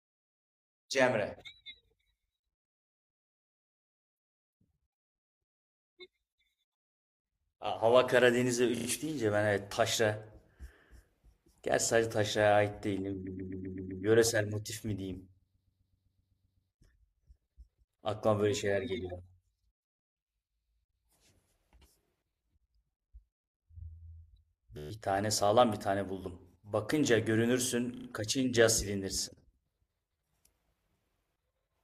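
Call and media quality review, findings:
Repeated frames, speech stutter at five points. 8.76 s: 25 ms block, three extra plays. 13.26–14.03 s: 128 ms block, six. 15.53–16.69 s: 128 ms, nine. 24.77–24.91 s: 13 ms, ten. 27.95–28.06 s: 35 ms, three. Encoder or transport resent frames. About 2.3 s added.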